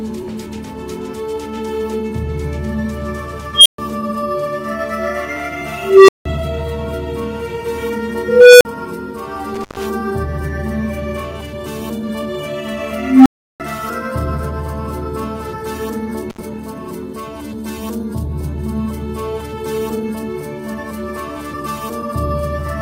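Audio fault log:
3.54 to 3.78 s, 5.77 to 6.26 s, 8.28 to 8.65 s, 12.93 to 13.60 s: unstable filter. Each time a pure tone rises out of the audio and swells fast, then cuts off into silence. The first is a high squeal around 3 kHz that builds in about 0.11 s and is followed by 128 ms of silence. The other three are lower tones of a few hundred hertz. They build in about 0.31 to 0.33 s, with gaps of 171 ms, 43 ms and 341 ms. A recursive filter with bad coefficients feeds its own output back with gain above one, so the tone grows until the numbers overflow and the output drops out until the filter resets.
9.54 to 9.87 s, 16.30 to 16.39 s: intermittent contact. The sound suddenly drops out, with crackle as it breaks and returns, for 130 ms and then 72 ms. A loose plug or cable lets the connection open briefly. While the line is open the signal is gone and only hiss remains. The crackle comes from the contact scraping as it makes and breaks.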